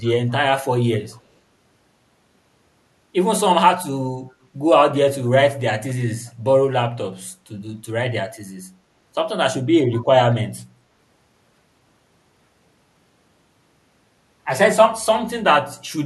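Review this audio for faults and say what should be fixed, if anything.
Echo leak at 1.11–1.21, 6.27–6.32 and 9.93–10.02 s: faint speech copies 227 ms late, strongest last, likely loudspeaker pickup the far-end echo canceller missed. A headset or better echo-canceller tuning at that end would prevent it.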